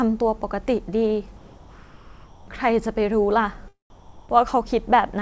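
A speech clip where the background drops out twice, from 1.37 to 2.48 s and from 3.90 to 4.29 s, and becomes flat, featureless comfort noise in place of the background, about 2 dB and 4 dB quieter. That's likely discontinuous transmission filling the pauses with synthetic noise, on a call path whose content stops at 8 kHz, which fits G.722.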